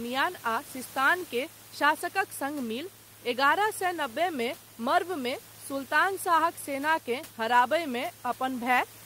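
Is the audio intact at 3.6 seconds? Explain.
Yes, at 3.6 seconds the speech is intact, with only the room's own background noise sitting about 25 dB below it, which belongs to the recording rather than being a fault.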